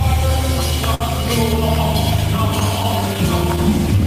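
The audio shows clock drift between sender and receiver throughout: the sender's clock runs roughly 4 percent slow, so the jitter buffer keeps draining and the receiver repeatedly stretches or repeats small pieces. This produces small timing hiccups at uneven intervals across the whole clip rather than in one place. From 0.95 to 1.02 s there is a short stall from a late packet. The buffer ran empty, and the last sound was held for 59 ms until the packet arrived, then playback resumed where it left off, now 59 ms later. What sets this apart from drift is that it is one isolated held sound with a slight buzz or dip, not a recurring pattern. Between 2.36 and 3.17 s come scattered short gaps, about four lost or late packets, each patched by continuing the previous sound and totalling around 40 ms of fill. None is longer than about 10 ms, so they register as brief ticks or smears clustered in that stretch, unlike the single longer hold at 0.95 s.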